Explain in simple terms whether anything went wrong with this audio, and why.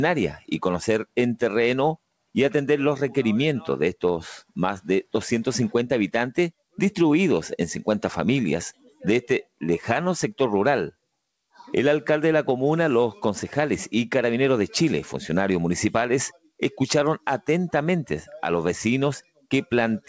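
Twice the sound suddenly dips and thins out, from 8.74 to 9.04 s and again from 19.22 to 19.46 s. That's sound cut by the noise suppressor: the call's cleanup mistook real sound for background noise and turned it down.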